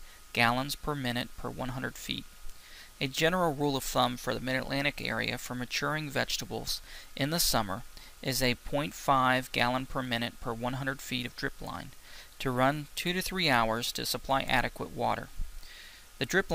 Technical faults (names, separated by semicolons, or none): none